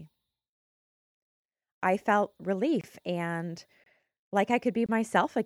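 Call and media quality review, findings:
Gap between chunks at 1.79, 2.81, 3.84 and 4.86 s: hard-edged 25 ms silences in the speech, repeating every 1.0 s. Probable component: packetiser or player pausing at each 1-second chunk boundary. No audio lost, only interrupted at the joins.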